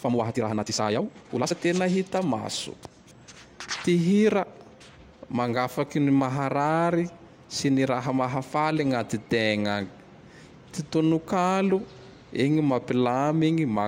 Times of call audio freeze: none

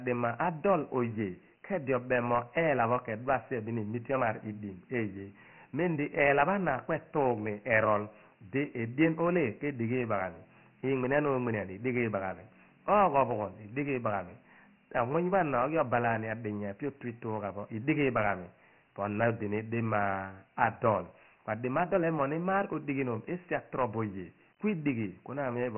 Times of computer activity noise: none

